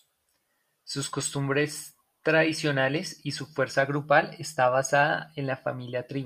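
A short bit of speech, and nothing technically wrong turns up anywhere in it.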